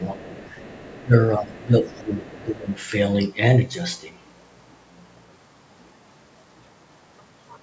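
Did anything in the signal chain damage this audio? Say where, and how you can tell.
Yes. From 0.0 to 0.4 s and again from 1.04 to 2.7 s the speech dips by up to about 15 dB, in pieces. This is speech suppressed in double talk, likely from the call's echo canceller ducking the talker while both ends spoke at once.

A faint second voice runs underneath, about 25 dB below the speech from 0.0 to 1.05 s and about 30 dB below from 1.51 to 2.75 s. This is the other side's voice leaking through, likely loudspeaker echo the canceller left in the microphone signal.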